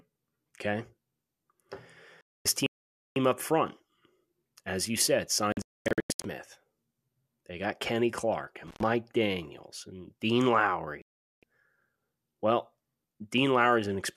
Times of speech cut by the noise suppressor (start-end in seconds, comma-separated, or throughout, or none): none